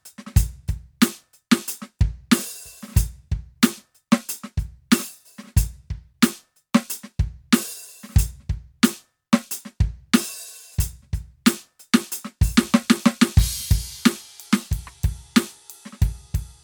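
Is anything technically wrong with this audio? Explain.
No, nothing is technically wrong with this music.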